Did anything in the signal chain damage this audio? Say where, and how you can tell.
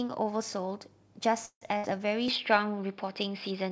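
Yes. At 1.46 s the speech freezes until 1.76 s: the last sound is held and fades, then about 70 ms of silence. It resumes where it stopped. This is likely a call audio freeze from a starved jitter buffer.

From 1.77 to 1.85 s there is a burst of packet loss at the network stage. The concealment holds a decaying sound, then the speech skips ahead, losing about 60 ms.

From 2.28 s to the end, the speech turns duller, with nothing above 5.3 kHz. The level shifts by about 5 dB, and a faint new noise floor appears. This likely means the input switched to a poorer device.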